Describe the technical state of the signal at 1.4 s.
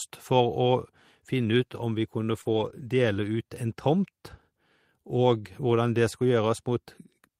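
At 1.4 s the speech signal is intact, with no dropout, distortion, glitch or other fault audible at that moment.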